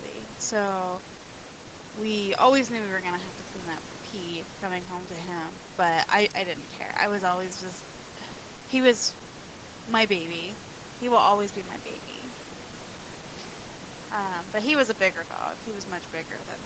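No technical faults are audible in this speech.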